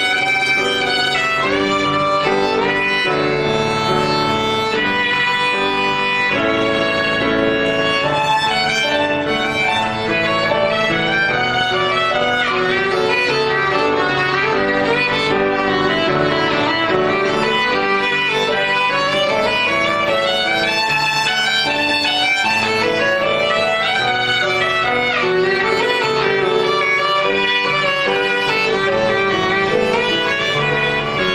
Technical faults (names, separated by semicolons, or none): overlap-add ripple